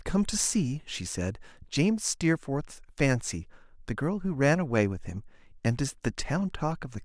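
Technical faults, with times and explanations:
No technical faults can be heard in this recording.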